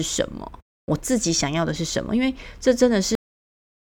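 At 3.15 s the speech stops abruptly mid-sound and drops straight to digital silence without any decay: a cut-off end, where the final buffers were never written or played.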